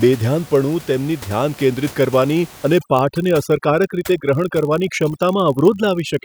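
The clip is speech with a steady buzz throughout at 46.9 Hz. That is a block size mismatch (padded). One stage writes slightly shorter blocks than the next reads, so each block ends in a single zero. The rate fits 1024-sample reads. Playback slows by only about 0.1 percent. From 2.79 s to the end, overdone noise removal sets in. The room noise, about 21 dB below the speech, drops and breaks up into twinkling specks. Quiet parts of the voice vanish too.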